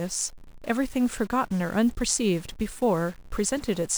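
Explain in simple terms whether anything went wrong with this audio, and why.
Something did go wrong, and it lasts the whole clip. The speech carries a harsh buzz mixed into it. It is still there in the pauses, where there should be silence. That points to a stuck bit. Digital audio is stored as numbers built from bits. If one bit stays fixed at on or off, many numbers come out wrong. Here the stuck bit is likely a fairly high one. So the error is steady and never goes away.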